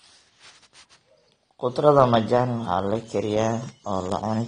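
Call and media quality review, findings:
Dull, smeared speech with warbling, fizzy sibilants, throughout. Spectrogram: hard ceiling near 9.7 kHz, nothing above. Likely AAC compression (AAC-LC), coarse per-frame quantisation fitting roughly 32 kbps, starving high frequencies.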